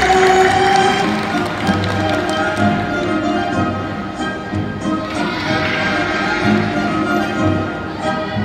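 Nothing in the audio stood out as a technical problem on listening.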